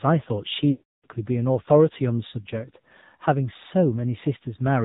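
AMR narrowband mobile codec damage runs through the whole clip. The speech has been squeezed into an 8 kHz-sampled band, so nothing above 4 kHz survives, and it sounds muffled and telephone-like. The codec rebuilds the voice from a vocal tract model excited by a handful of pulses per 5 ms subframe, and at this rate the result is plainly buzzy and synthetic, a coarseness that fits a low bitrate around 7.4 kbps.

Lost AMR speech frames hit from 0.72 to 1.07 s, a gap of about 320 ms. Frames that failed their error check were replaced by the decoder repeating the last good pitch and vocal tract settings at falling gain. The speech is smeared into a drawn-out, tonal stretch that dies to silence within the first 0.1 to 0.2 s and stays silent for the rest of the gap. When good frames return, the voice comes back weak and rough for a moment before settling.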